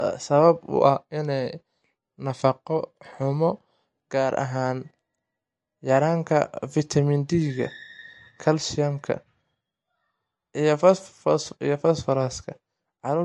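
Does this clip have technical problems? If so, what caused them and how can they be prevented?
Yes. Throughout the speech the audio has a watery, swirling quality, with chirpy, metallic edges on s sounds and softened consonant attacks. This is likely MP3 compression at a low bitrate, around 46 kbps: short of bits, the encoder dropped quiet frequency lines that flicker on and off between frames. Encoding at 128 kbps or higher, or using a lossless format, prevents it.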